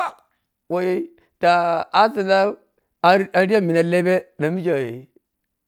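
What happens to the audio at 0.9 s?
Nothing goes wrong at 0.9 s; the speech carries on intact through that moment.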